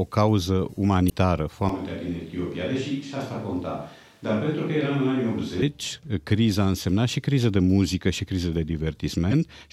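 At 1.06 to 1.12 s there's a short glitch from damaged data in the compressed stream: bad bytes throw the decoder off, it loses its frame sync and hunts for the next header, so you get a garbled blip. From 1.69 to 5.62 s the speech suddenly goes roomy and hollow, with thinner bass, the level down about 5 dB and background noise sitting only around 35 dB under the speech. That's likely a switch to a distant microphone, with the close mic dropping out. It snaps back just as abruptly. Then at 9.31 to 9.33 s the damaged-data glitch comes back, briefer this time but with the same decoder stumble.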